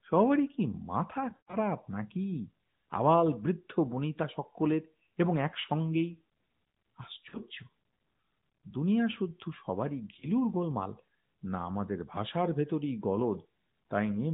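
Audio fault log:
1.30–1.57 s, 5.62–5.66 s, 7.30–7.38 s, 10.20–10.28 s, lost AMR speech frames: the first span is the worst, with sound smearing into a drawn-out tone and fading toward silence over its longest stretch of about 120 ms, amid about 160 ms of dropouts scattered across 240 ms. The later three are brief dips or warbles, the one at 7.30 s about twice as long as the others. After each, speech returns weak or rough for a moment. Frames failed their checks, so the decoder repeated the last good pitch and vocal tract settings at falling gain, all through a narrowband mobile codec that passes nothing above 4 kHz and adds light codec damage.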